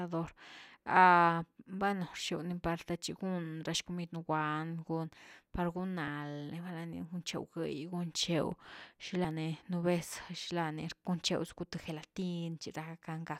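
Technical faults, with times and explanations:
6.07 s and 9.24 s, compressed frames skipped: the sound jumps ahead about 20 ms, then about 100 ms, fitting whole 24 ms frames that were left out of playback.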